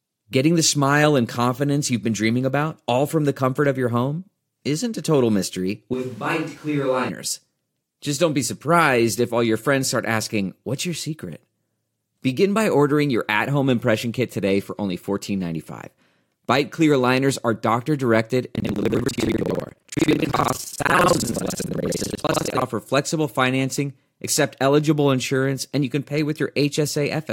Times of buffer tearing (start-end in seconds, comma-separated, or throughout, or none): 18.53-22.62